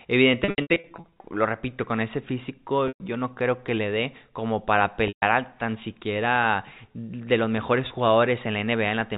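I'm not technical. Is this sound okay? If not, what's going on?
No. There are dropouts from packet loss with pitch repetition. From 0.44 to 1.24 s many short gaps are patched by repeating the last bit of sound, which makes a choppy, buzzy stretch. Single gaps follow at 2.88 s, between "repito con ese físico" and "yo no creo que", at 5.08 s, between "le dé como para" and "a tan siquiera de", and briefly at 7.88 s after "siquiera de los mejores". The call uses G.711 telephone coding, which keeps only the narrow telephone band.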